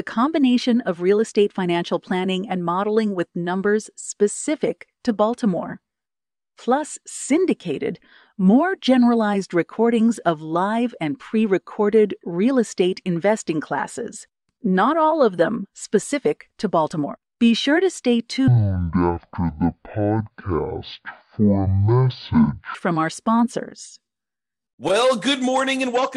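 A section at the wrong speed runs from 18.48 s to 22.75 s, where the speech suddenly plays at half speed. Pitch and tempo drop together, so the voice turns deep and dragging, about ten semitones lower, with every syllable stretched out. The change is abrupt at both ends, which likely comes from that stretch being played back or fitted to the wrong clock, rather than anything in the recording itself.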